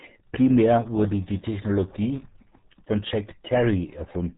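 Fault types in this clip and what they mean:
RealAudio 14.4 codec: A low-rate speech codec from the dial-up era. The speech is heavily damaged throughout, muffled and gargly, with nothing above 3.8 kHz. That fits an 8 kbit/s stream. Unlike a simple low-pass filter, the gargle reveals coarse parametric coding.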